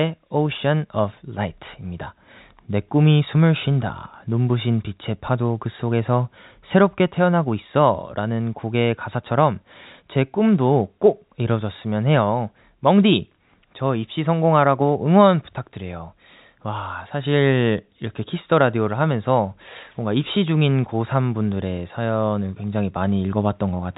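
Nothing stood out on listening to this speech, which carries the narrow band of G.711 telephone coding with nothing heard above about 3.8 kHz.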